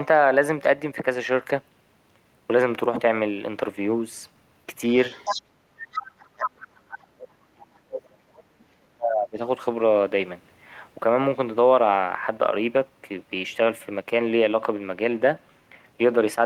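An echo canceller that likely failed to clear the far end's loudspeaker sound from the microphone lets the other side's voice leak through at 5.1 to 5.42 s, nearly as loud as the talker, and again at 5.86 to 6.02 s, somewhat quieter, as short scraps.

From 6.1 to 9.38 s, with both sides likely talking at once, the canceller cannot tell the talker from the echo and turns everything down. The result is speech suppressed in double talk: the voice sinks very deeply, almost to nothing, for roughly three seconds.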